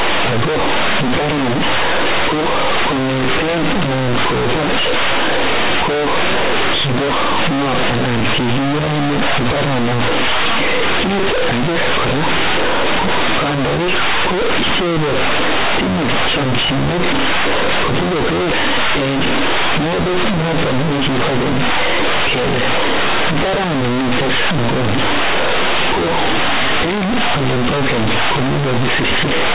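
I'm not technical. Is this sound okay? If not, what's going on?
No. Companded audio is being read as linear: telephone-coded mu-law bytes are played back as plain 8-bit samples without being expanded first. That bends the waveform badly, so throughout the speech everything sounds very loud and buzzy, quiet moments are as big as loud ones, and pauses are filled with harsh noise. The underlying G.711 telephone coding itself is fine.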